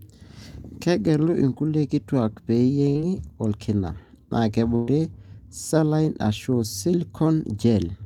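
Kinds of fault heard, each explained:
Burst of packet loss: Consecutive packets were lost. The receiver extended the last sound and faded it, so a short held buzz or hiss replaces the speech. It occurs at 2.89 s and 4.75 s, skipping 60 ms and 120 ms.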